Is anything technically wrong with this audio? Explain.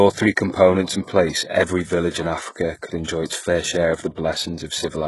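Yes. Throughout the speech, the s sounds are gritty and metallic, and nothing reaches above 11.5 kHz. This is likely HE-AAC compression, whose replicated treble points to a very low bitrate of around 12 kbps.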